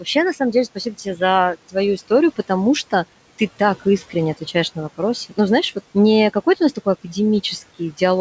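Just after "на самом деле" (0.75 to 1.21 s), and between "что ты" and "отвечаешь на вопросы" (3.8 to 4.15 s), the speech briefly turns faint and swallowed, dipping by about 10 and 12 dB. This is speech cut by the noise suppressor, which mistook quiet speech for background.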